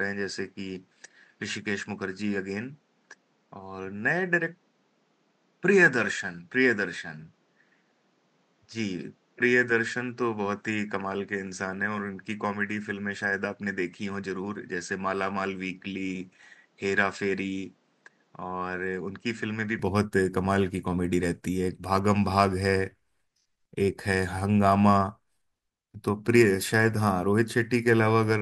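From the start until 19.79 s the speech is band-limited, with nothing above 8.1 kHz, somewhat quieter (roughly 5 dB down) and carrying its own faint noise well below the speech. At 19.79 s it opens out abruptly, with no gap, which points to the input likely being switched to a poorer device and then back. A codec bandwidth drop would narrow the band alone, whereas here the noise floor, level and tone all change together at one instant.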